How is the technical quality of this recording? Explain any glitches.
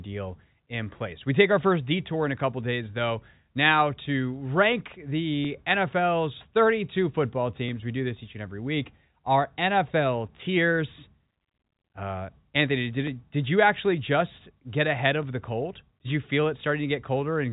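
The recording has four sharp clicks. It is telephone-band G.711 speech, with nothing above about 3.8 kHz.

Dropped samples are the likely cause of clicks at 5.45 s after "though now to rank", 7.69 s, 13.07 s before "it did you actually", and 15.23 s between "get ahead" and "the cold". Each gap is under a millisecond. The waveform jumps to a later value, giving a single sharp click.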